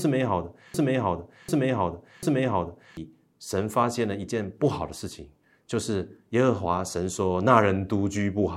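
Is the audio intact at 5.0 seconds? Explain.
Yes, the speech is intact at 5.0 seconds, with no dropout, click, distortion or other fault at that point.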